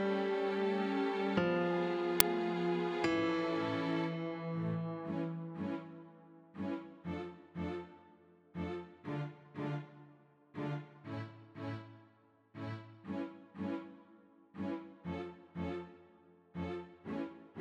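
At 2.20 s there is an uninitialised buffer fault. A short, loud crack cuts through the sound. It lasts about 5.8 ms, which fits a 256-sample buffer. The playback system sent that block out before any audio had been written into it. Whatever data was left over in memory was read as samples instead. The result is a harsh, loud noise.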